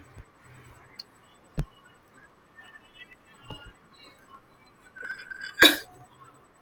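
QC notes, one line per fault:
0.06–6.52 s, periodic USB or driver dropouts: a steady train of ticks every 64 ms, about fifteen per second, audible only under the speech. Each tick is roughly a millisecond of silence where a background task briefly stalled the USB bus or audio driver.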